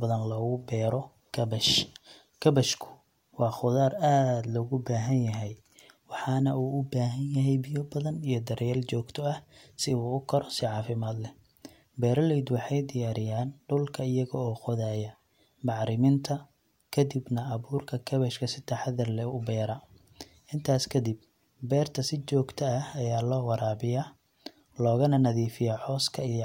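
Listening to this speech recording turned up nothing that stood out as a technical problem.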